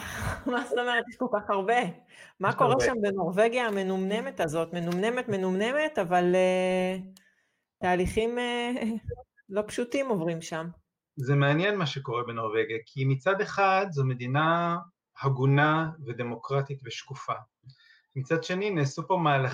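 No technical faults can be heard anywhere in the signal, which stays stable and intact throughout.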